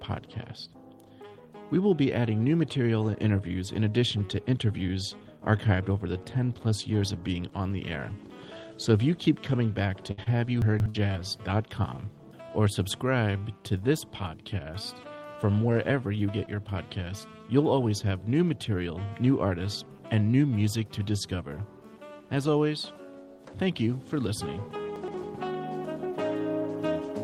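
From 10.11 to 11.15 s, repeated packet loss strikes: five short holes, the longest 60 ms, are patched by extending the preceding sound, covering about 15% of that span. The result is choppy, robotic audio with fragments missing. Inside that stretch, at 10.62 to 10.86 s, chunks play out of order: a 60 ms chunk arrives three chunks late and plays after material that should follow it, giving a jumbled moment with three hard joins. The same fault recurs at 24.96 to 25.14 s, with a 60 ms chunk two places late, again heard as a brief garble.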